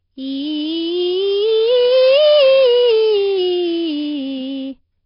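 Throughout, the music sounds rough and hissy, with nothing above 5.3 kHz. Heavy smearing fits a rate near 22 kbps, likely Nellymoser compression.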